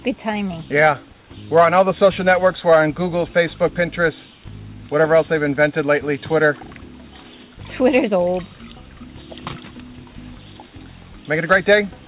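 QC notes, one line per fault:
No faults found.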